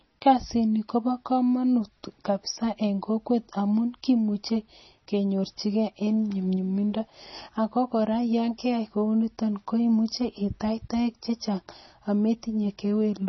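From start to finish, the speech has nothing above 5.9 kHz, so s sounds lose their edge. Quiet detail swirls and flickers with a watery, metallic quality. This is likely heavy MP3 compression, pointing to a very low bitrate around 24 kbps.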